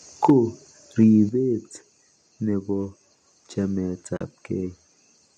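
Microphone overload sets in at 0.24 s and lasts to 0.32 s. The loudest peaks of the speech push about 4 dB past the converter's ceiling, so a small share of samples have their tops sheared flat. You hear this as a harsh, crackly edge on the syllable. The likely cause is an input volume set too high for the converter to handle.

Microphone volume stepped down follows at 0.30 s, inside that same distorted stretch. Voice and background fall together by about 4 dB in a single step, with no fade. This is likely the call software reacting to the clipping and lowering the device's input level.

A second microphone overload runs from 1.01 to 1.04 s. Here the peaks reach the converter's limit rather than going beyond it, and a few percent of samples flatten, so the crackle is shorter and milder than the first. Another microphone volume stepped down comes at 1.29 s, this time an abrupt drop of about 7 dB.

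AAC frame loss with muting opens a 40 ms gap from 4.17 to 4.21 s, which fits about four lost frames. The decoder zeroes the missing spectrum, and the overlapping windows taper the sound out and back in, leaving a soft-edged hole. The low-delay AAC coding around it likely adds only light graininess.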